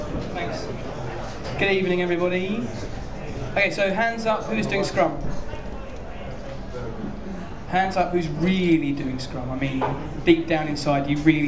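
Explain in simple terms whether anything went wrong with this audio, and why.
Nothing went wrong here.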